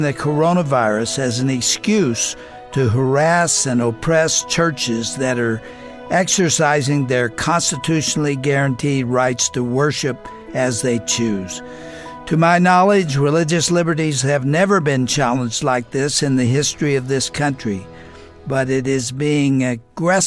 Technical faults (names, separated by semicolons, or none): none